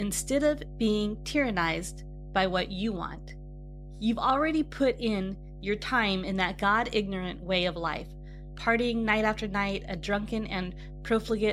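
A steady mains hum runs under this speech recording from start to finish, a fixed low tone at 50 Hz sitting only around 15 dB below the speech, so it stays clearly audible even while someone is talking. Unlike wind or handling rumble, it never drifts or swells; its pitch and level hold constant and it doesn't change with the speech. The cause is power-line coupling, either through a ground loop or from a nearby transformer.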